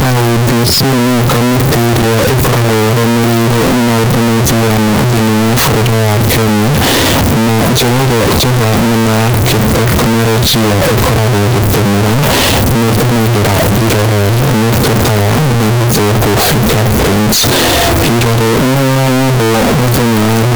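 Throughout, speech is harsh, noise as loud as voice; waveform a near-square slab at a near-fixed high level, spectrogram broadband smear. Likely float read as integer.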